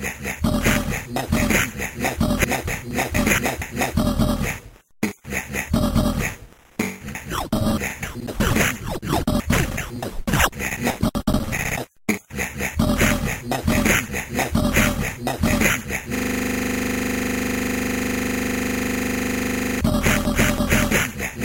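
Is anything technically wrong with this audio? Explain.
Yes, there's a system hang loop from 16.15 to 19.81 s. Something froze while the audio hardware kept replaying the same 40 ms chunk of its ring buffer, about ninety times over. At 25 repeats per second, that comes across as a rough, buzzy stutter.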